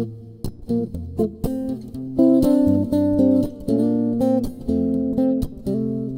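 No technical faults are audible anywhere in the clip.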